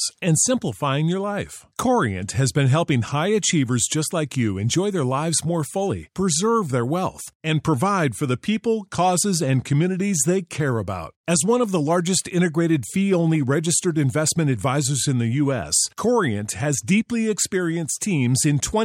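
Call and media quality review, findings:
Clock slip clicks, 0.74–17.92 s: faint regular ticks roughly every 1.5 s, about fifteen total, over speech. Likely free-running clock mismatch of around 15 ppm, one sample dropped or repeated per slip. Spectrogram: evenly spaced thin vertical broadband lines. Waveform: single-sample step.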